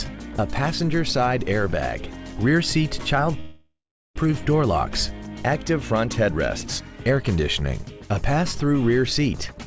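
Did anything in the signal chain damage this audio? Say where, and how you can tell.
Yes. From 3.40 to 4.18 s the sound stops and is replaced by a fading buzz or hiss that ends in about 390 ms of silence, then resumes where it left off with nothing lost. This is a call audio freeze, likely from delayed network packets draining the jitter buffer, so the receiver filled a 0.76 s gap by continuing the last sound.

From 9.48 s to the end there is a jitter buffer speed-up. The audio runs at about 127% speed with unchanged pitch as the receiver cuts short pitch-period slices, about 50 ms in total, to shed the extra delay. The band limit at 8 kHz fits a G.722 call path.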